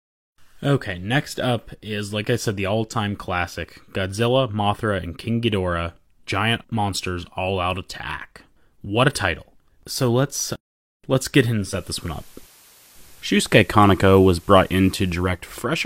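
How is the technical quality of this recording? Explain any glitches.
One fault stands out: digital radio blending to analogue. Just after "let's let's get", at 11.51 s, the receiver loses the digital stream and cross-fades over about 437 ms to the station's FM broadcast, staying there until 15.50 s. The FM path adds a layer of hiss roughly thirty decibels under the speech and shifts the level by about 4 dB, so the sound turns slightly noisier and louder or quieter at that point.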